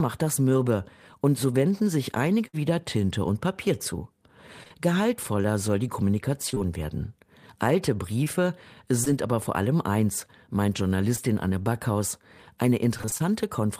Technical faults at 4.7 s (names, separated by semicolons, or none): short concealed packet loss